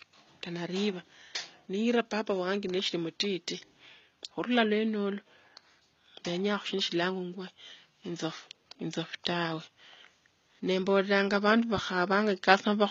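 From start to finish the speech carries plainly audible HE-AAC compression damage, most likely from that codec at a rate that fits roughly 20 kbps. Only the lower spectrum is truly coded, and the treble is rebuilt by copying lower bands upward under a coarse envelope. S sounds therefore come out gritty, metallic or lisping rather than simply dull. That false brightness is what separates it from a low-pass cut, and the faint room noise, about 51 dB down, stays separate from it.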